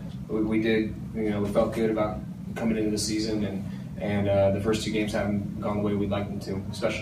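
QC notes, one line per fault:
Nothing stood out on listening.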